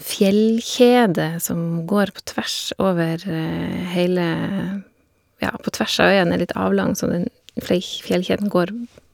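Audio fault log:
Nothing to log here; this bit of speech gave no trouble at all.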